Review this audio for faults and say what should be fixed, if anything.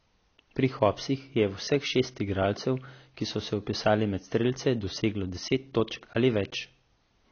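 Throughout, the speech sounds dull and smeared, with a warbling, fizzy texture on sibilants and nothing above 6.6 kHz. The cause is likely AAC compression. An AAC-LC encoder short of bits, consistent with roughly 24 kbps, lowers its cut-off and quantises the remaining bands coarsely. To prevent it, encode at a higher bitrate or deliver from an uncompressed source.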